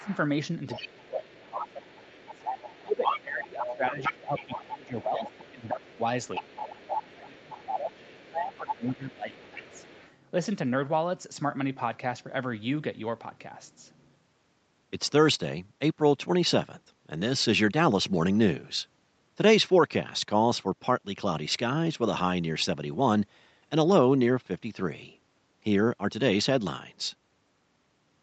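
Speech suppressed in double talk, at 0.0 to 0.1 s and again across 0.8 to 9.8 s: the talker's speech dips by up to about 20 dB for roughly 7 seconds in total, likely because the echo canceller attenuated everything while both sides spoke. Other side's voice leaking through, at 0.0 to 0.17 s faintly and from 0.7 to 10.1 s at about 10 dB below the speech: a second voice is audible, likely loudspeaker echo the canceller failed to remove. The whole recording of speech is band-limited to 8 kHz by the call path.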